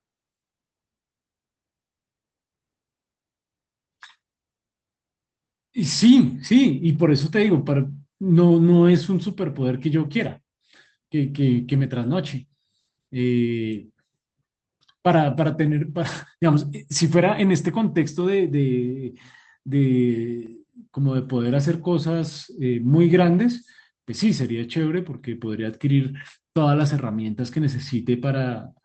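At 15.65 to 15.67 s a brief rough, noisier stretch of speech appears: a lost packet rebuilt from error correction, where the decoder played a low-bitrate copy to fill 20 ms, which fits a single lost packet. At 20.46 s a brief tick or dip is heard, a block of digital silence where about 5.56 ms of audio dropped out to silence and back with no fade.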